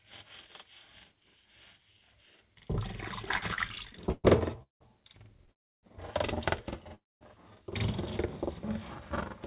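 A recording of everyday sound carried over a call path whose spectrogram shows nothing above 4 kHz. Throughout, it has a channel delay (doubling): one channel trails the other by about 46 ms, which fits a 2048-sample buffer, and the mono sum makes every onset sound twice as a tight slap at equal level. A waveform shows each transient paired with a same-size copy 46 ms later, and a spectrogram shows comb-like notches. From 3.22 to 4.82 s there are repeated stalls (stutter): thirteen brief hold-ups, the longest 178 ms, add up to about 480 ms of filled-in sound, roughly 30% of that stretch, with nothing lost. The sound drags and judders. The spectrogram shows smeared, stretched repeats of the preceding texture, and the waveform shows short fading tails. Two call audio freezes follow, at 5.52–5.85 s (311 ms) and 6.95–7.23 s (260 ms). Each is a brief buzz that decays into silence, about 310 ms and 210 ms respectively, before the sound resumes where it stopped. 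They appear as flat gaps in the waveform and blank columns in the spectrogram, likely from packets held up in transit that emptied the jitter buffer.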